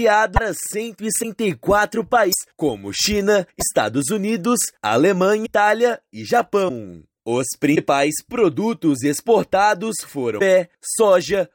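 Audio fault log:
0.35, 1.22, 2.31, 3.59, 5.45, 6.68, 7.75, 10.39 s: broken MP3 bit reservoir, likely after dropped frames. Each 30 ms glitch, about one 26.1 ms frame, appears as a thin vertical break in the spectrogram.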